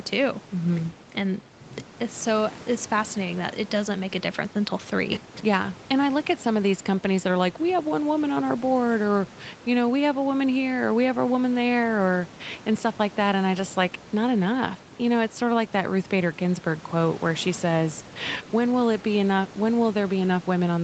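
Nothing stood out on listening to this speech; the call path's 8 kHz bandwidth ceiling and the room's faint background noise, roughly 22 dB below the speech, are what such a call normally sounds like.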